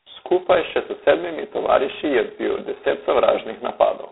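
G.726 ADPCM coding with very few bits per sample, consistent with 16 kbit/s, runs throughout: nothing above 3.9 kHz, and a harsh, rasping hiss tracks the speech level.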